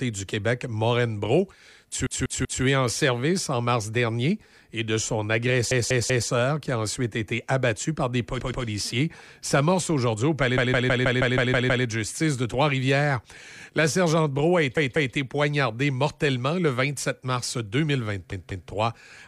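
Speech with repeated frames, where duplicated compressed blocks make the decoder replay a fragment. Stutters come at 2.06 s, 5.71 s (after "dernier et de son"), 8.40 s (after "été abattu par des"), 10.58 s, 14.77 s (before "poignardée mortellement le") and 18.32 s. Blocks of 128 to 192 ms replay two to eight times, and the longest run adds 1.28 s.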